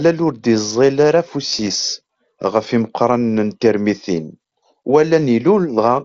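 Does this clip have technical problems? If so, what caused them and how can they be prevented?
Yes. From 1.47 to 1.70 s there is concealed Bluetooth headset packet loss on the wideband mSBC link. About 97.5 ms of speech went missing in short gaps scattered over 225 ms, none longer than 22.5 ms. The receiver filled each gap by repeating the best-matching stretch of recent waveform, which leaves a brief buzzy, slightly warbling roughness. Keeping the headset close to the phone with a clear path and less nearby 2.4 GHz traffic prevents it.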